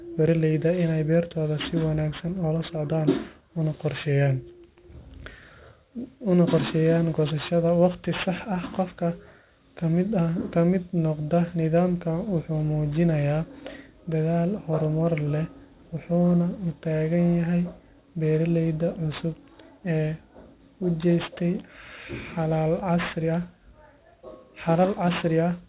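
Aliasing runs through the whole clip. The speech sounds like it was dropped to a rate that fits 8 kHz with no filtering, so everything above 4 kHz folds back down, sitting roughly 20 dB under the voice and making sibilants gritty and metallic.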